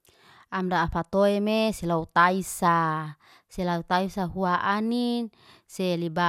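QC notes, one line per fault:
throughout, generation loss: speech sounds swirly, smeared and hollow, nothing above 16.7 kHz. Likely about seven re-encodes, each adding noise. Fits MP2 at 128 kbit/s.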